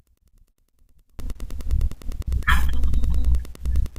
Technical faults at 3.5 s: Wi-Fi interference

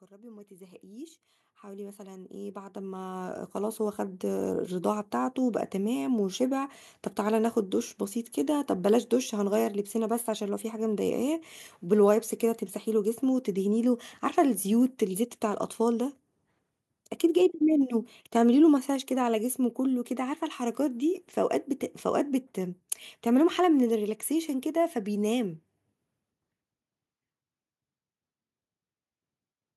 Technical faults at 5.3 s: none

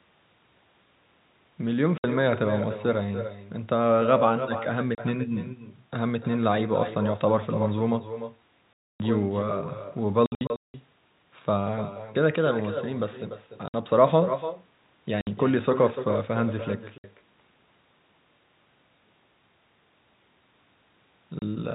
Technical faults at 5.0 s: echo with no canceller; packet loss filled with silence

